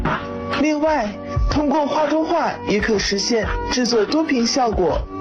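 No technical faults are audible.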